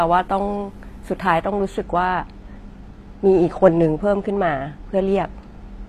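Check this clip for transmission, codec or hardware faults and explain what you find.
Two faults are audible in this speech clip: codec damage throughout, and comb filtering from 1.44 s to the end.

Throughout, the treble has a gritty, plainly metallic quality and nothing is present above 14.9 kHz. The likely cause is HE-AAC compression at a low bitrate, around 24 kbps. Only the lower spectrum is coded properly, and the upper bands are rebuilt by copying lower content upward under a coarse envelope. The rebuilt treble is bright but its harmonics do not line up with the real ones, so s sounds come out lispy and metallic. A plain low-pass or bandwidth limit would sound dull rather than falsely bright, which is what sets this apart.

From 1.44 s onward there is channel delay (comb filtering). One channel arrives a couple of samples late, a tiny fraction of a millisecond, and when the two are summed to mono, content common to both cancels at evenly spaced frequencies. 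Because the delay is so short, the first notch lands high, around 10 kHz. That leaves a fixed dullness in the upper treble. Unlike the codec grit, this notch does not change with the sound and starts at 1.44 s.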